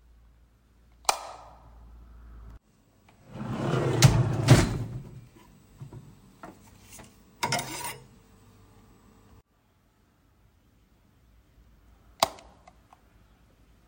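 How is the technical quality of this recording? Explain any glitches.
The recording has one recurring glitch: overlapping chunks, at 3.24–3.26 s, 8.26–8.28 s and 13.28–13.30 s. The audio was processed in 5 s blocks, each starting 20 ms before the previous one ended, so that 20 ms replays at every join and is heard as a brief click or stutter.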